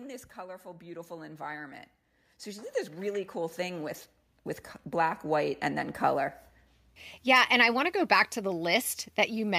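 A speech recording with automatic gain rising twice: from 0.34 to 1.86 s the level climbs by about 7 dB, then from 2.44 to 5.92 s by about 9 dB, as the gain control judges the input too quiet and slowly turns it up. Voice and background noise swell together. On a waveform the envelope widens steadily across each span, and on a spectrogram every band, including the noise floor, brightens gradually.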